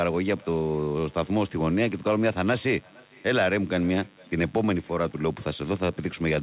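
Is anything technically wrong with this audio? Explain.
Yes, two things run through the whole clip, on top of the band-limited phone sound with nothing above 4 kHz, which points to a G.711 mu-law call path.

First, mains buzz: a steady, raspy buzz sits about 30 dB under the speech the entire time. Something like a dimmer, rectifier or poor shielding lets switching spikes from the 50 Hz supply leak in, and their harmonics climb well up into the voice band.

Second, echo with no canceller: every phrase gets a faint, thin copy trailing it by roughly half a second, at about 28 dB below the talker. The far end's loudspeaker is feeding its microphone, and nothing is stripping that return path out.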